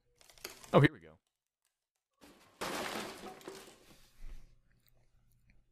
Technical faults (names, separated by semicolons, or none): audio dropout to a faint residue